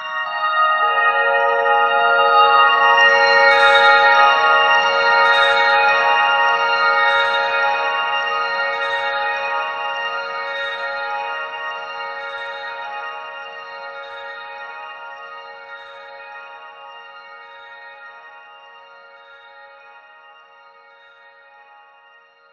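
The clip is a recording of sounds, and no technical fault can be heard in it. There is nothing to locate in time or trace to a cause.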